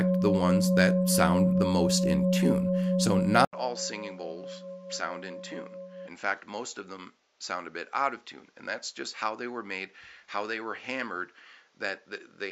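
At 3.45 s the audio drops out for 80 ms, then returns about 10 dB quieter, duller and boxier, with nothing above 7.6 kHz and a new, faint noise floor through the end. The likely cause is an input switched to a poorer device mid-recording.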